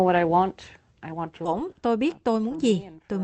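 A speech clip carried over a call codec, with band-limited sound that fits Opus at 8 kHz audio bandwidth. At 1.45 to 1.47 s there is a skip ahead. About 0.7 s of speech vanishes, and the two sides join with no gap. From 1.60 to 3.03 s comes a jitter buffer speed-up. Speech runs about 10% fast at unchanged pitch and sounds hurried. The buffer is trimming short pitch-period pieces, about 0.15 s in total, to cut excess delay.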